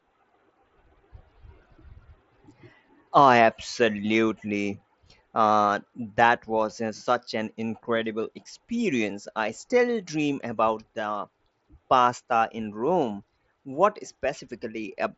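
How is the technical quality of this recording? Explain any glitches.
No glitches stand out in this speech recording; it has the typical sound of a Bluetooth mSBC headset link, with nothing above about 7.7 kHz.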